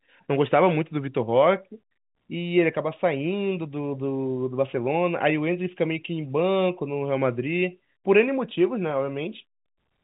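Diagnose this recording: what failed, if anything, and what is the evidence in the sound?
Nothing failed in this recording.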